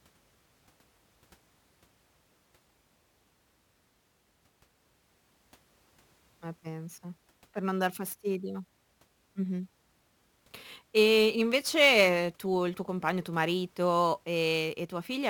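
From start to finish the speech carries a crude rate conversion. Samples were repeated or dropped on a fixed cycle instead of being properly filtered, a pattern that fits a 44.1 kHz to 48 kHz change done by nearest-sample picking. The timing error puts inharmonic tones into the audio, sitting roughly 25 dB below the speech. It is heard as a gritty fizz that rises with louder syllables and sibilants.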